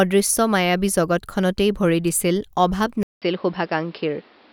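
At 3.03 s the speech drops out for 188 ms, then returns narrower and duller, with nothing above 5.5 kHz and a new background noise roughly 30 dB below the speech, while loudness stays about the same. The likely cause is the input switched to a poorer device partway through. On a spectrogram, a short blank gap is followed by a flat ceiling at 5.5 kHz and a raised noise floor; the waveform shows the gap but little change in amplitude.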